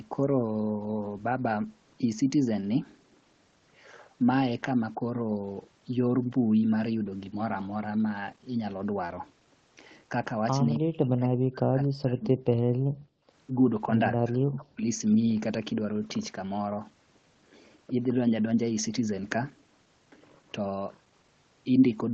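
Speech suppressed in double talk, 10.77 to 12.36 s: the speech sinks by roughly 40 dB in patches, likely because the echo canceller confused it with loudspeaker echo while both sides talked. Background gated by the echo canceller, 12.77 to 13.31 s: the room sound drops by about 35 dB while the loudspeaker plays, then returns. Speech suppressed in double talk again, 14.19 to 14.86 s: a shorter, similarly deep dip in the speech.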